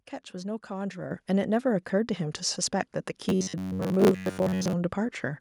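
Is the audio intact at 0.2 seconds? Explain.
Yes, at 0.20 seconds the speech plays through intact, with no audible fault at that moment.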